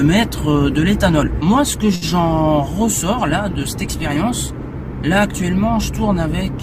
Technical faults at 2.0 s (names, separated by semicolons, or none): short stall from a late packet